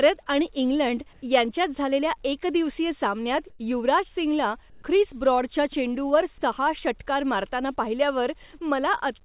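At 1.13–1.22 s, 3.50–3.59 s and 4.70–4.82 s, the background in short pauses turns into a smooth, featureless hiss: comfort noise in place of the background, likely from discontinuous transmission. A spectrogram shows flat, textureless patches there, with level steps of about 4 dB and 3 dB in the first and third, all capped at 4 kHz by the call codec.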